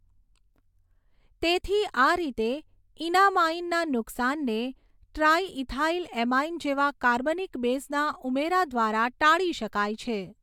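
No technical faults can be heard anywhere in this speech recording. Nothing in the audio points to a problem in how it was captured, processed or delivered.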